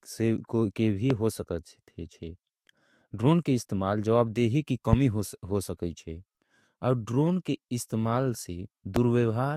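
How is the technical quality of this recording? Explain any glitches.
Three loud pops break into the speech, each a single pop lasting about 25 ms: at 1.10–1.13 s, at 4.93–4.95 s just after "के इस्तमाल जवाबदेही की", and at 8.96–8.99 s. The first rises about 15 dB above the speech, and the other two about 20 dB. The likely cause is a sudden voltage step from a plug, switch, static or driver glitch, which the following circuitry shapes into a sharp pulse while the speech carries on underneath. On a waveform, each pop is a tall, narrow spike above the speech envelope. On a spectrogram, each shows as a thin vertical stripe spanning the whole frequency range.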